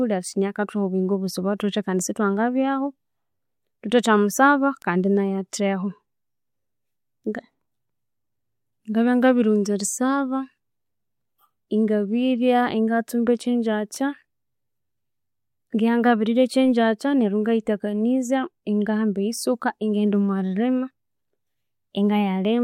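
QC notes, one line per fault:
4.82 s, 13.96 s: bit error spike. A single flipped bit corrupts two samples, then one, jumping by a power of two to about -19 and -13 dBFS, giving two sharp broadband ticks unrelated to the speech.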